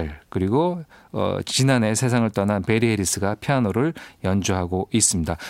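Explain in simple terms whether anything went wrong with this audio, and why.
Nothing went wrong; the speech comes through as it should.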